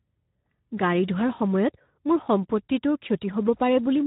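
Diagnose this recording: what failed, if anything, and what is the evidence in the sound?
The failure is at the codec stage: Speex coding runs through the whole speech clip, and its damage is plainly audible. With too few bits for the excitation signal, the voice comes out hoarse and noisy. The rough texture fits a low Speex setting, around 11 kbps. Nothing is heard above 3.8 kHz. On a spectrogram, energy stops at a flat ceiling near 3.8 kHz, and harmonics look smeared and noise-filled rather than cleanly striped.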